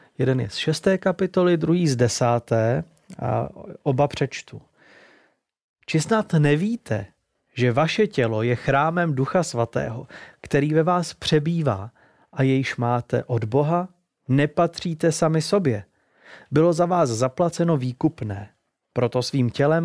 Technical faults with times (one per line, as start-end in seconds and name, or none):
none